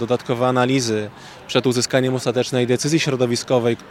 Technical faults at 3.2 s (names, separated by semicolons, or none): none